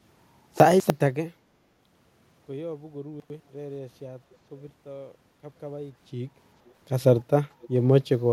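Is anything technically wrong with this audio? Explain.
Yes, a couple of things.

Around 0.6 to 0.9 s and again at 3.2 to 3.4 s, you get chunks out of order. 100 ms blocks land late, two then one block behind, so the sound jumbles briefly.

At 7.61 to 7.69 s there's a faint echo leak, a delayed copy about 487 ms behind and roughly 25 dB down. It's likely loudspeaker pickup that the far side's echo canceller missed.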